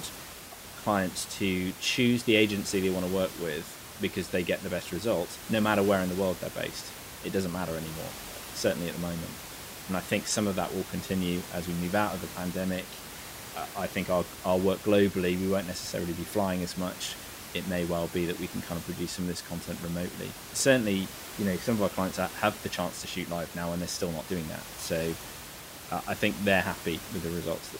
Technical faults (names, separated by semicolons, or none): none